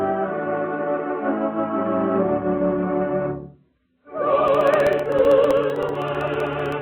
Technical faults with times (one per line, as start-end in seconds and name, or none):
4.48-6.72 periodic USB or driver dropouts